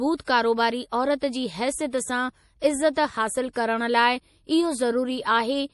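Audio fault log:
throughout: MP3 compression, likely from a low bitrate around 48 kbps. Nothing reaches past 11.5 kHz, so a spectrogram shows a flat ceiling with weak high detail flickering in and out between frames. That on-off switching is what gives the speech its plainly audible watery, swirly quality.
1.90 s: pre-echo, a short hiss spreading about 28 ms ahead of a sharp onset. The codec smeared noise meant for the loud attack back across the quiet gap, visible as a thin smudge before the waveform's jump.
3.53 s: pre-echo again, about 31 ms of hiss leading into "करणु लाइ". Block-wide quantisation noise fills the moment before the attack, softening it. On a spectrogram a broadband haze precedes the onset.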